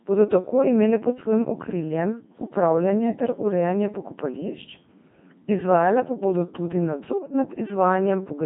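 Throughout, the speech carries the robotic, buzzy sound of the Codec 2 vocoder, heavily damaged and consistent with a 2.4 kbit/s mode. Only pitch, voicing, energy and envelope survive, resynthesised from sines, so a spectrogram shows smeared, overly regular harmonic combs and a waveform that doesn't match natural speech.

From 7.09 to 7.34 s, just after "izvajale pa bodo tudi", bit errors on digital voice radio at a rate of a few percent corrupt several vocoder frames. The voice jumps in pitch and level and breaks into bleeps and warbles. A spectrogram shows abrupt, blocky shifts in harmonic spacing and energy from one frame to the next.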